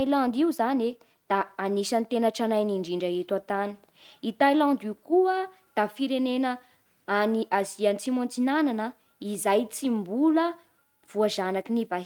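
No technical faults can be heard at any point in the speech recording.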